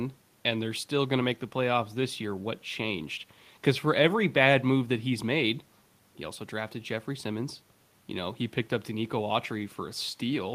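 No technical faults occur at any point in the speech, and the faint room noise, about 38 dB below the voice, belongs to the recording itself.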